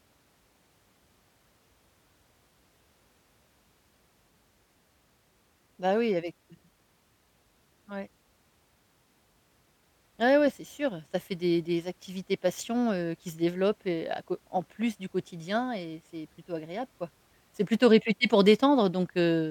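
No technical faults can be heard anywhere in this speech recording. There is no point in the audio that calls for a time mark or a closer listen.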